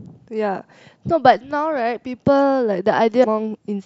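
At 3.20 to 3.26 s there's damaged data in the compressed stream: the decoder loses sync on bad frames, giving a brief glitch in the speech.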